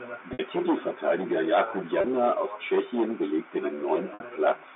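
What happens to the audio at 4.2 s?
Packet loss with pitch repetition: from 4.14 to 4.20 s about 60 ms of speech went missing, which fits two lost packets, and the receiver filled the gap by repeating the last pitch period. That sounds like a brief buzzy hold that fades toward silence before speech cross-fades back in.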